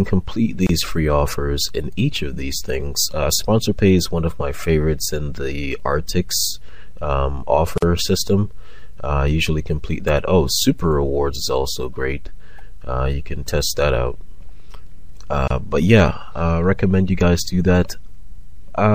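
Throughout, the audio sounds watery and swirly, with smeared attacks. This is MP3 compression, likely at a low bitrate near 64 kbps, zeroing weak frequency lines. Short silences cut into the continuous sound at 0.67 to 0.69 s (about 26 ms), 7.78 to 7.82 s (about 47 ms) and 15.48 to 15.50 s (about 28 ms). Each has smeared edges before the sound resumes where it stopped. These are gaps at joins of encoded pieces, where separately encoded segments were spliced without trimming each run's start delay and end padding.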